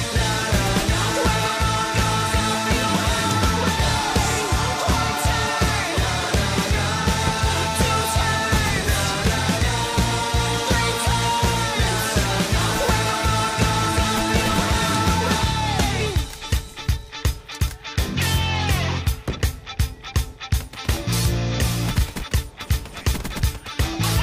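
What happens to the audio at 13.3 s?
Nothing goes wrong at 13.3 s; the audio plays through that moment intact, with no dropout, click, distortion or other fault.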